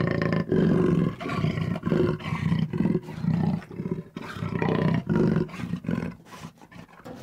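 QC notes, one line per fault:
5.55–7.20 s, drift correction step: playback suddenly runs about 5.9% fast for 1.65 s, so speed and pitch rise together by roughly 100 cents, close to a full semitone, and the sound drops back to its original rate at 7.20 s. The likely cause is clock-matching software changing its resampling rate in a single jump to drain or refill its buffer. Because tempo and pitch move as one, it sounds like an abrupt detuning rather than a tempo edit.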